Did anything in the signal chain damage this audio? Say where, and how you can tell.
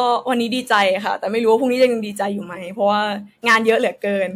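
Yes: hard clipping at 0.72–0.84, 1.53–1.85 and 3.48–3.70 s, about 4, 3 and 8 dB over. A converter or number-format stage sliced the speech peaks flat, producing high-harmonic crackle rather than a limiter's rounded squash.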